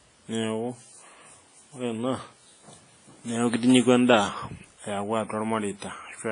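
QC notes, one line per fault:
Throughout, WMA compression: a low-bitrate transform codec, likely WMA, quantised the speech heavily in long blocks, and the damage fits a rate near 24 kbps. Its coding noise smears across tens of milliseconds around each sound, giving a ringing, washy edge and a hiss that swells and fades with the signal. Weak spectral detail has been dropped, and nothing survives above about 10.3 kHz, so the top end sounds dull.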